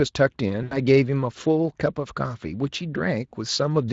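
From 0.63 to 0.79 s the speech smears into a fading, stretched sound and stays thin briefly afterward. This is VoIP packet loss concealed by the speech codec: about 80 ms of packets, which fits four 20 ms frames, went missing, and the speech decoder extrapolated its last pitch and filter with falling gain.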